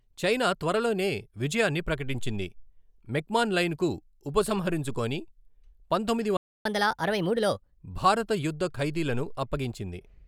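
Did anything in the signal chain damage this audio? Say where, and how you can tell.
Yes. Playback stall at 6.37 to 6.65 s: the speech cuts out mid-flow for about 0.28 s of silence, then resumes where it stopped. This points to the playback stage, likely a player buffer running dry or its output thread being blocked, so no samples reached the output.

Catch-up at higher speed from 6.65 to 7.79 s: right after the gap, from "భారత యుద్ధ ఖైదీలను", the speech runs at 1.25 times normal speed and its pitch rises by roughly four semitones, then settles. The player is resampling its backlog to recover the lost time.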